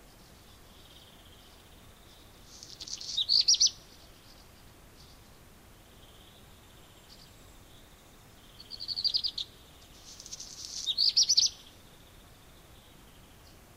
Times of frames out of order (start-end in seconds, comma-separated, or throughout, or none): 2.77-2.88, 11.33-11.42